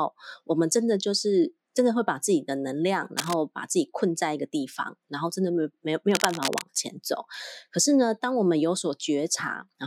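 A speech recording with two bursts of cable scratch noise: a short one from 3.17 to 3.34 s and a longer one from 6.11 to 6.67 s. Each is a dense, irregular crackle sitting only a few decibels below the speech, so it rasps clearly over it. The likely cause is a worn cable, connector or control being moved, its contact resistance fluctuating rapidly and injecting uneven noise into the signal path.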